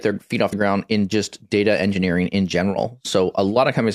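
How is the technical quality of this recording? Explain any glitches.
One glitch stands out. At 0.52 s, compressed frames are skipped: a couple of 24 ms frames never play, so the speech jumps ahead about 50 ms.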